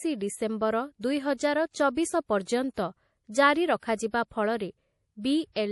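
From start to finish the speech carries plainly audible damage that points to a low-bitrate encode, most likely MP3 compression at around 48 kbps. The encoder has cut the treble, so nothing is present above 11.5 kHz, and weak frequency lines drop in and out between frames, giving a watery, swirly texture with metallic chirps on s sounds. On a spectrogram this shows as a hard flat ceiling at 11.5 kHz and scattered holes flickering through the upper bands.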